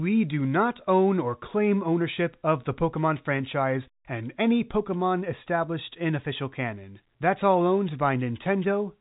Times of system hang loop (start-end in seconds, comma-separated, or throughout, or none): none